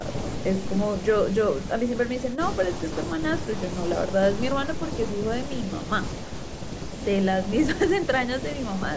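No technical faults occur at any point in this speech, and the missing lowest bass is just the call's normal microphone processing.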